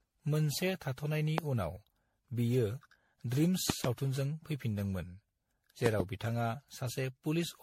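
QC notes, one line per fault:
Throughout: generation loss. The speech has that swirly, hollow, smeared quality, and consonant attacks are blurred, more than a single 64 kbit/s MP3 pass would give you. Nothing comes through above 16.5 kHz. The likely cause is repeated MP3 decoding and re-encoding, around fifteen rounds. Each pass re-quantises on a shifted frame grid, so the noise and spectral holes stack on top of each other.
1.38–1.40 s, 3.70–3.87 s, 5.86–6.02 s: loud pop. There's a single sharp pop at the first spot and a quick double pop at each of the other two, all peaking at about 20 dB above the speech, which carries on underneath. That fits a sudden voltage step or pulse getting into the chain, likely from a plug, switch, static discharge or driver glitch. The downstream circuitry shapes each pulse into a short, hard click or thump.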